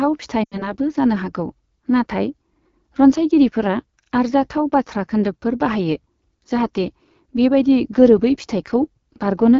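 Throughout, the AMR wideband (HD Voice) codec runs at one of its lowest rates, which fits 8.85 kbit/s, so the speech sounds plainly rough and raspy. From 0.44 to 0.75 s, lost AMR speech frames make the decoder reuse stale pitch and vocal tract settings at falling gain. About 80 ms of concealed sound, consistent with four 20 ms frames, drops to near silence within two frames before "जानो हागौ".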